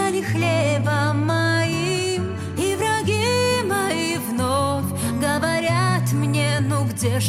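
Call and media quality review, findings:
No audible faults found in this clip.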